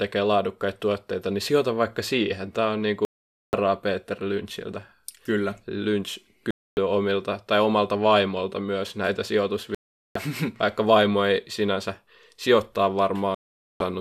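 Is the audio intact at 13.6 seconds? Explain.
No. At 13.6 seconds the speech sits inside a digital broadcast dropout running from 13.35 to 13.81 s, just after "vaimo ei sinänsä sijoittaa". The receiver lost valid frames and muted, so the audio cuts to silence for about 0.46 s and that programme material is gone.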